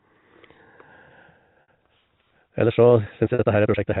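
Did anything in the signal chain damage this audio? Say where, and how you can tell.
Yes. At the network stage there are two short dropouts concealed by packet loss with pitch repetition, at 1.62 to 1.68 s (60 ms) and 3.34 to 3.39 s (50 ms), which fit runs of about six and five 10 ms packets. Each gap sounds like a briefly held, buzzy tone. The receiver looped the last pitch period and faded it out. On a waveform these show as identical repeating cycles with decaying amplitude, and on a spectrogram as flat, frozen harmonic stripes.

From 2.37 s to the end, a time-stretched section speeds the pace up by about 1.81 times while the pitch stays put. It sounds rushed. The likely cause is time-scale processing in software, squeezing the audio to fit a length by dropping short pieces. A spectrogram shows syllables compressed in time with unchanged harmonic spacing, and the waveform shows small discontinuities at the splice points. 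The G.711 mu-law telephone coding keeps everything below 4 kHz, as expected.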